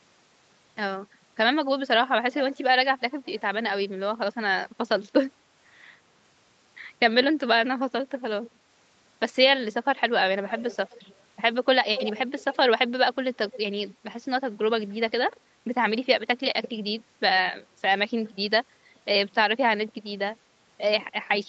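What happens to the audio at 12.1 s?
An echo canceller on the far end likely let part of its loudspeaker pickup slip through, so this is an echo leak, running from 11.95 to 12.2 s. The speech played into that room was caught by its microphone and returned, arriving about 259 ms behind the original. The result is a brief, faint duplicate of the speech, roughly 10 dB quieter, trailing just after it as a slightly detached repeat.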